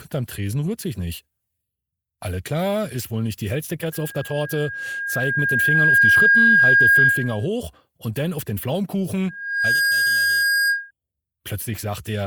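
Loudspeaker feedback squeal appears from 3.92 to 7.47 s and again from 9.29 to 10.91 s: the microphone re-amplifies its own loudspeaker until a 1.6 kHz tone runs away. It swells over about two seconds to roughly 10 dB above the sound, then more quickly, in about half a second, to around 5 dB. A spectrogram shows a bright horizontal line at 1.6 kHz, and the waveform shows a steadily widening envelope.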